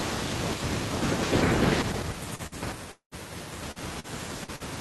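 Speech passing through a call codec whose band stops at 12 kHz, with a cluster of network losses from about 2.35 s onward. Short concealed packet loss occurs five times: 2.35–2.42 s, 3.71–3.79 s, 4.00–4.07 s, 4.44–4.51 s and 4.56–4.63 s. In each, roughly 40 ms of audio did not arrive in time, and the receiver patched the hole by extending the preceding sound for 33–43 ms before crossfading into the real signal. The result is a brief smear or wobble. A burst of packet loss follows at 2.47–2.55 s, close after the first short loss. Here about 40 ms went missing, and the concealment ran for 49 ms, holding the last sound and letting it decay, so a voiced stretch turns into a short buzz and unvoiced material into a fading hiss before playback resumes further along. The longest event runs from 2.92 to 3.14 s and is likely a long network dropout. About 200 ms of audio never plays. Roughly 200 ms of synthetic continuation fades out, leaving about 100 ms of silence, and the speech then picks up further on with the intervening portion missing.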